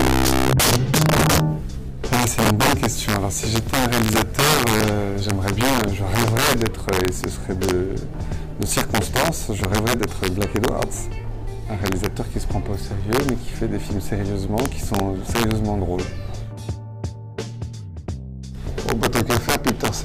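Integer overflow runs through the whole recording: the signal has been driven about 11 dB past the top of the integer range. Rather than being held at full scale, every peak beyond the limit wraps around to the opposite extreme. Only around two percent of samples exceed the limit, but each one produces a full-range jump, so the loudest moments of the sound break into harsh, violent cracks far sharper than ordinary clipping distortion.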